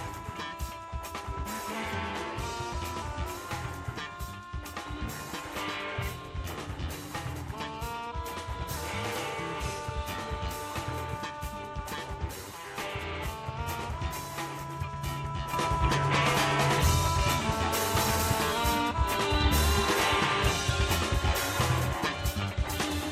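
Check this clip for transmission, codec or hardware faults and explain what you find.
One fault is present: a sudden gain jump. At 15.53 s the level steps up by about 8 dB between one sample and the next and stays there until the end of the clip at 23.11 s. The background noise rises by the same amount as the foreground sound, so the change comes from the signal path, not the source. The likely cause is a digital gain setting or bit shift applied without a ramp.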